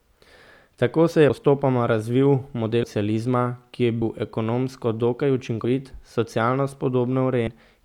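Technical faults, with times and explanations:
1.3, 2.83, 4.02, 5.65 and 7.47 s, compressed frames skipped: the speech jumps ahead by about 0.1 s at 1.3 s (before "postopoma razvil") and 5.65 s, and about 0.2 s at 2.83 s (after "postopoma razvil"), 4.02 s (between "ki je" and "ekonomsko dokaj") and 7.47 s. Whole frames, consistent with a 32 ms frame length, are never decoded, so the audio skips ahead by their length at each join.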